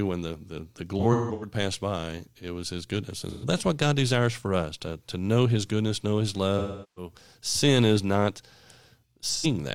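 AAC frame loss with concealment occurs at 0.99–1.53 s after "when the the the", 3.27–3.45 s after "it was his goodness", 6.58–7.12 s before "sin is not", and 9.29–9.46 s. The decoder fills missing audio from earlier spectra, producing brief smeared, phasey patches.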